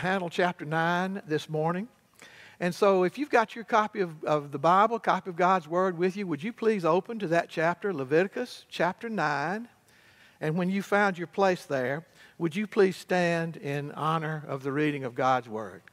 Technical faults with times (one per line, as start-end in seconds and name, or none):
none